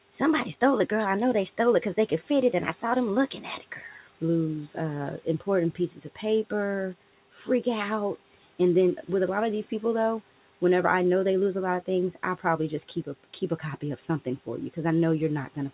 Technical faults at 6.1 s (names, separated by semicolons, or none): speech cut by the noise suppressor